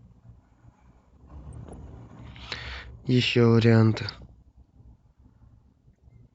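DAB burbling at 1.53–1.74 s, 4.07–4.29 s and 5.99–6.11 s. Bit errors of a few tenths of a percent slip past error correction, so corrupted sub-band samples and levels put short blips of noise over the speech.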